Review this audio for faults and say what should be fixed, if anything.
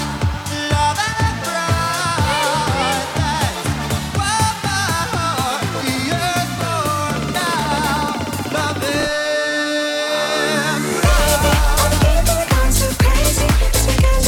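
Around 9.00 to 9.05 s there's a case of chunks out of order: one block of roughly 21.33 ms lands one slot late, so two blocks swap places. Nothing's missing, but you get a brief jumbled blip with three hard joins. Fix it by reordering on sequence numbers or timestamps in the jitter buffer before playback or writing.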